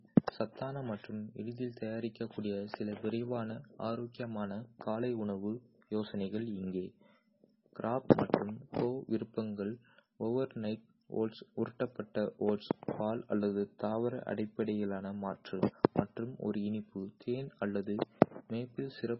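All the way through, the speech sounds watery and dull with nothing above 5.6 kHz, likely heavy MP3 compression at a bitrate around 16 kbps. At 8.09 s there's pre-echo: a 13 ms smear of hiss just before a sharp attack, where the codec's block noise leaks in early.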